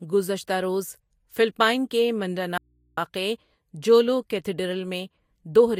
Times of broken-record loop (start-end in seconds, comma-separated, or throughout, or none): none